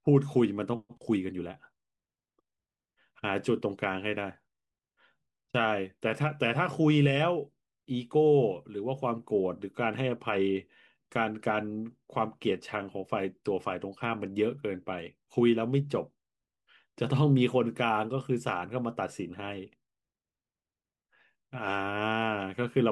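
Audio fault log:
No audible faults detected.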